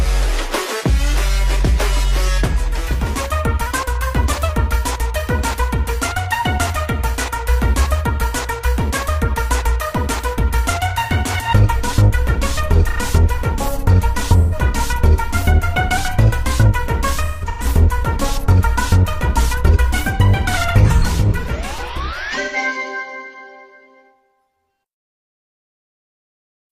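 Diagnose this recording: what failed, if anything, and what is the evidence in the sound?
A drift correction step at the playback or buffer stage is the likely cause. At 3.66–4.49 s, 15.97–16.66 s and 19.71–20.57 s, speed rises 6.24% and pitch about 105 cents together. Wow would drift gradually instead.

AAC frame loss with concealment at the codec stage leaves smeared, phasey patches at 14.39–14.55 s (128 ms), 17.25–17.65 s (256 ms scattered, longest run around 150 ms) and 22.41–22.56 s (128 ms). These are filled-in spectra, not the clean silence of a dropout.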